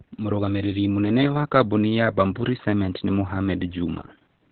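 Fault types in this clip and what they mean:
Opus voice compression: the speech sounds muffled, hoarse and slightly robotic throughout, consistent with heavy narrowband SILK coding around 8 kbps; the spectrogram shows nothing above 4 kHz.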